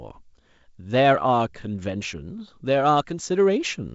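No technical faults can be heard in this speech, which carries the G.722 wideband telephone coding in its 56 kbit/s mode, with nothing above about 7.7 kHz and a light coding hiss.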